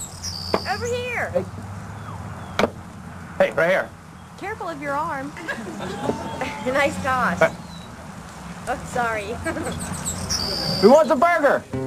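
No technical faults can be heard anywhere in the clip. Nothing in the sound points to a problem in how it was captured, processed or delivered.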